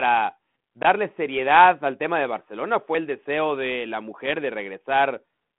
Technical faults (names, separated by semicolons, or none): loose connector crackle